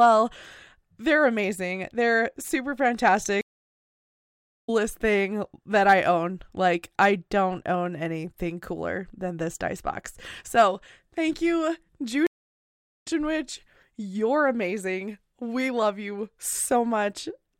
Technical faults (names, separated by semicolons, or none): stream reconnect